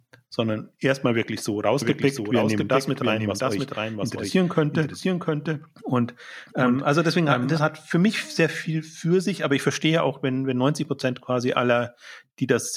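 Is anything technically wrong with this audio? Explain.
Yes. From 1.82 s, right after "sondern erstmal wirklich so", until 7.58 s, just before "hat für mich sehr", there is a doubled audio track. A second, slower capture path likely mixed the speech in twice, so a dry copy about 5 dB quieter trails roughly 0.7 s behind, starting and stopping abruptly.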